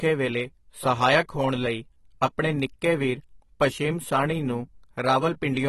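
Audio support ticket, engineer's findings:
Dull, smeared speech throughout the clip; nothing above 12 kHz; fizzy, warbling texture on sibilants. Likely AAC compression (AAC-LC), damage plainly audible, consistent with a low bitrate near 32 kbps. Encoder drops high bands and coarsely quantises the rest. Differs from a plain low-pass filter: the band-limited audio also warbles and fizzes on sibilants instead of just sounding muffled.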